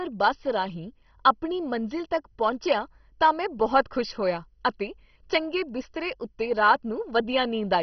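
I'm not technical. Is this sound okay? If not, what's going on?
No. The speech sounds dull and gurgly throughout. Nothing above 6.1 kHz remains. This is likely MP2 compression, squeezed too hard, dropping the upper sound.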